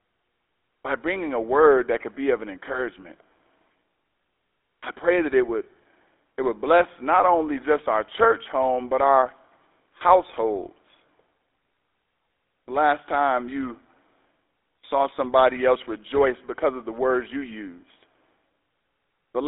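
From start to finish, the speech carries the sound of the GSM full-rate codec. The band is limited to roughly 300 Hz to 3.7 kHz, so the sound is thin and boxy. The codec models the vocal tract as a filter and excites it with a coarse, regularly spaced pulse train. Much of the fine excitation detail is thrown away. The result is a plainly audible buzzy, gravelly roughness, which fits a 13 kbps GSM channel.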